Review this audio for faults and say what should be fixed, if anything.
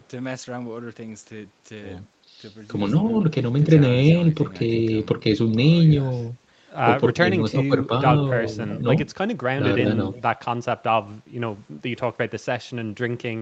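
Between 7.15 and 7.92 s the speech dips in pieces, around a third of a second in all, dropping by about 15 dB at its deepest. This is likely speech suppressed in double talk: the echo canceller mistook simultaneous talk for loudspeaker echo and attenuated it. The waveform shows notched envelope gaps, and the spectrogram shows energy thinning across the band. Tuning the canceller's double-talk detector to hold near-end speech during overlap would prevent it.

Faint repeats at 8.69–8.82 s and 10.13–10.22 s, 356 ms after the original, sit about 20 dB and 25 dB below the speech. This is likely echo leak, where far-end loudspeaker pickup escaped cancellation. On a spectrogram they appear as weak shifted copies of earlier harmonic patterns. Better acoustic isolation or a longer, better-converged echo canceller filter would prevent it.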